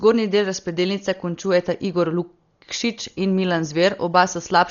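Speech, dull and band-limited throughout, with a rough, fluttering hiss clinging to voiced sounds, likely from Dolby Digital compression at a bitrate that fits about 40 kbps. A spectrogram shows a flat ceiling near 7 kHz and grainy noise filling gaps between harmonics.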